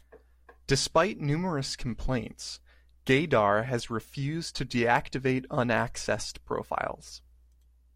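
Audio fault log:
Nothing stood out on listening to this speech clip.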